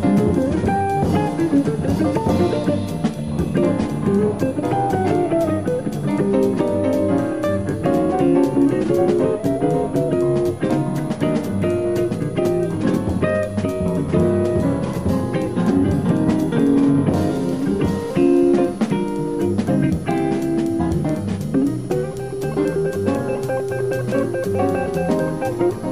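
A switching power supply feeding the recording chain is running in an audible burst mode or beating with another one, leaking a switching supply whistle into the audio for its whole length: a faint high tone near 10 kHz, roughly 35 dB below the signal, wandering between 9.8 and 11.0 kHz.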